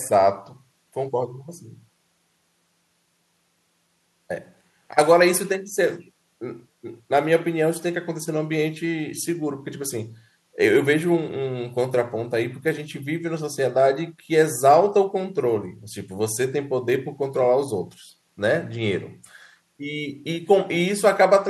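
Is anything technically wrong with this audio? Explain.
No, the speech recording shows no technical faults, with the signal arriving intact and steady throughout.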